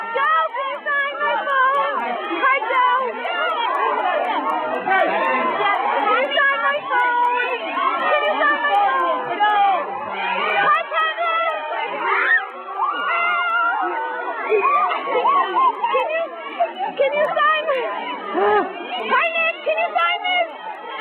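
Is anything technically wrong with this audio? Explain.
Yes. Throughout the clip there is a fault from the resampler being restarted on every block. The rate conversion from 48 kHz down to 24 kHz was run on each 250 ms block in isolation, so at every block edge the filter lacked the true neighbouring samples and left a small error. That gives regular ticks at 4 per second, present only where there is signal. On a spectrogram these appear as thin vertical broadband lines spaced 0.25 s apart. The waveform shows small discontinuities at the same block boundaries.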